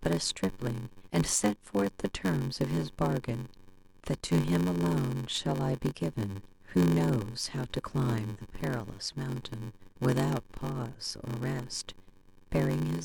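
From start to finish, the speech carries a block size mismatch (padded). One stage writes shorter blocks than the next reads, which fits a 512-sample block. Each block ends in a silent gap. This makes a buzz at 93.8 Hz. The speech runs slow, at 0.861 times normal speed, with pitch roughly unchanged.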